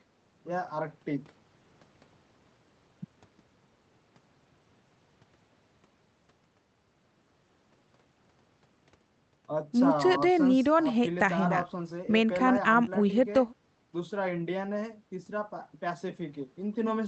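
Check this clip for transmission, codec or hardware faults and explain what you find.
Nothing stood out on listening to this speech clip, which has come through a normal call connection.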